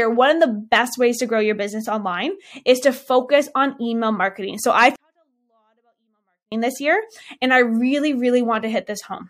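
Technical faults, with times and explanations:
4.96 to 6.52 s: 24-bit alignment error (too quiet). Speech sitting in the low 24 bits of each 32-bit word was read as full 32-bit values, dropping it about 48 dB. It stays clean but nearly inaudible, with abrupt level jumps at both edges, recovering before "this year and I".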